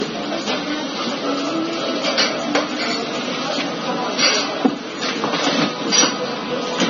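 Low-bitrate audio saved at a high bitrate runs throughout this clip of sounds: nothing survives above 6.9 kHz, a ceiling that likely comes from an earlier low-bitrate encode, such as 24 kbit/s AAC, later re-saved as high-rate MP3, which cannot restore the missing top end.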